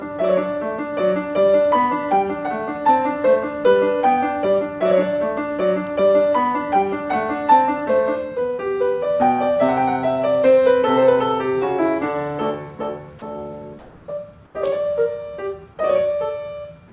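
Comfort noise in place of the background appears at 13.79 to 14.06 s and at 14.45 to 14.54 s, where the real background gives way to smoother synthetic noise, about 1 dB and then about 5 dB quieter. This likely comes from discontinuous transmission, with the receiver filling the gaps. The audio passed through a call path with nothing above 4 kHz, which fits a narrowband telephone codec such as G.711.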